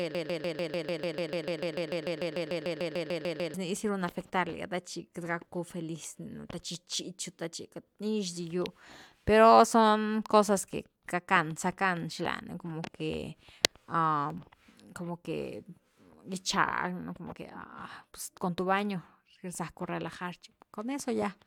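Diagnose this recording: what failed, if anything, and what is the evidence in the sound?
A broken-record loop occupies the opening of this speech recording, already running when the audio begins and ending at 3.54 s. A fragment of about 148 ms repeats exactly, back to back, 23 times, with no variation between cycles. The stage is most likely the playback or streaming buffer: the player or encoder stalled and kept re-sending the last chunk it held. Whatever audio belonged in those first 3.5 seconds is gone, replaced by the repeating fragment.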